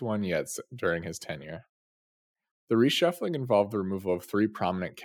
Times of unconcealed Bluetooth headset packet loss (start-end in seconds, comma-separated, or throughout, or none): none